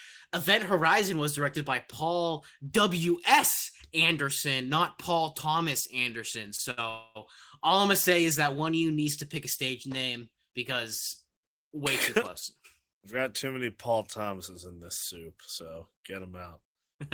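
From 6.71 to 6.79 s there is a short stall from a late packet: the last sound is held for about 65 ms with a slight buzz or dip, and nothing is lost. From 6.89 to 7.17 s a call audio freeze follows, with a fading buzz or hiss lasting about 259 ms that never drops to silence, likely from packets held up until the jitter buffer ran empty. The audio then resumes with "all I'm gonna say". From 12.79 to 13.46 s a jitter buffer speed-up trims about 50 ms of pitch periods, so the speech runs about 6% fast at unchanged pitch and sounds slightly hurried.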